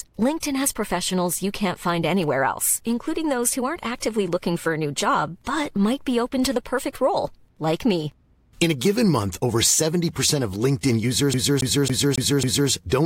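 This is a speech clip with a CD stuck on one turn near the end. From 11.34 to 12.70 s, the same 274 ms slice of audio plays five times in a row. Each jump brings a brief mute. A scratch is throwing the laser back one track every revolution, causing this even stutter.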